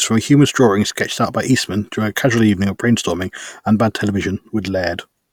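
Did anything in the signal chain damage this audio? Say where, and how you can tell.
No, nothing along the chain has left an audible mark on this speech recording, and the signal arrives intact at every stage from capture to playback.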